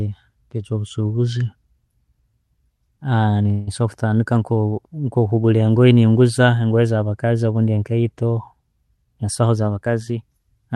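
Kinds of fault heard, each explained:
Call audio freeze: From 3.51 to 3.69 s the sound stalls and the last moment is drawn out as a fading buzz for about 157 ms. The speech then resumes exactly where it stopped, so the pause is inserted and nothing is lost, likely because packets were held up and the jitter buffer ran empty. Unlike a dropout or packet loss, there is no chopped-out syllable and no silent hole, only stretched sound.
Jitter buffer speed-up: From 9.04 to 10.59 s the speech runs at about 109% of its normal rate while keeping its pitch. The receiver trims tiny pitch-period slices again and again to shed roughly 150 ms of built-up delay, so the delivery sounds hurried. This differs from a playback-rate error, which would raise the pitch along with the speed. It also differs from a freeze, which adds time instead of removing it.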